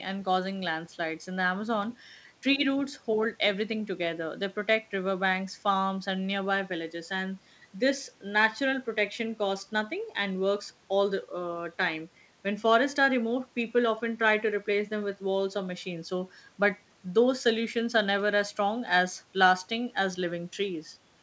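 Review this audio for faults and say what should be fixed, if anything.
Nothing needs to be fixed, as the review finds no faults in this audio.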